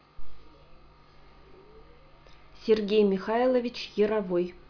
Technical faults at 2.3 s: none

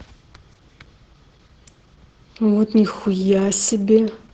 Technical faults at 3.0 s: Opus voice compression

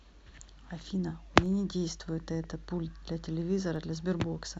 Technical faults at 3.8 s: DC step

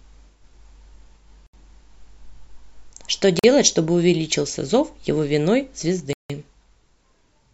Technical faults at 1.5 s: Bluetooth stall

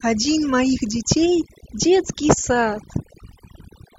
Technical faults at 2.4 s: overdone noise removal

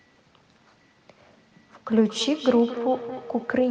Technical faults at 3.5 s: feedback echo between two devices

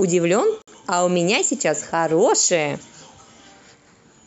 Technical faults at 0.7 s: gap at a join of encoded pieces

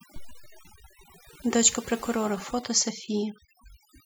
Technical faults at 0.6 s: overdone noise removal

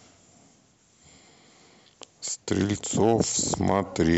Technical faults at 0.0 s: none

